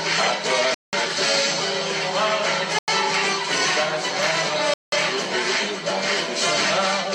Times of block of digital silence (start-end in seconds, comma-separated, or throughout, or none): 0.74-0.93, 2.79-2.88, 4.74-4.92